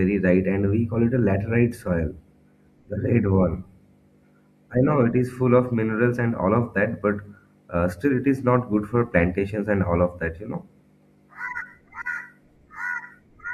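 Nothing goes wrong anywhere along the way here; the speech simply runs its course with no technical faults to point to.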